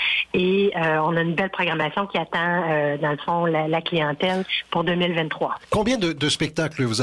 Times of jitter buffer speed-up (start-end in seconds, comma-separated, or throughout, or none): none